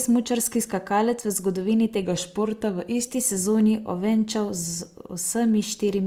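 From 2.04 to 3.07 s, just after "skakalec v zgodovini", the speech drops about 5.8% in speed and about a semitone (104 cents) in pitch, then snaps back. That is likely a drift correction step. Unlike wow or flutter, it holds one fixed offset rather than wavering.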